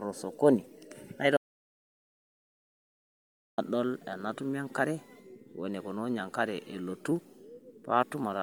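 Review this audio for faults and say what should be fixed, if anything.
A grainy, breathy edge sits on the speech throughout, with the upper band sounding noise-filled rather than detailed. This is likely Bluetooth LC3 compression working in 10 ms transform frames, and the audible damage fits a rate around 48 kbps. The top extends to roughly 20.1 kHz. Record over a wired or lossless path, or raise the LC3 bitrate.

From 1.37 s to 3.58 s the sound cuts to silence with no room tone, and about 2.2 s of speech is lost. This is an audio dropout to silence, likely from the input link failing while the recorder kept writing silence. Secure the connection and monitor input levels during capture, then re-record the missing section.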